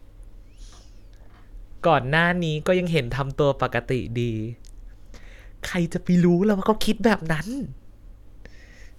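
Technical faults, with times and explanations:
No technical faults turn up anywhere in this speech recording, so there's nothing to list here.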